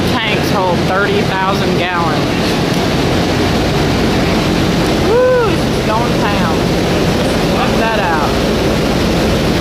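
No technical faults are audible.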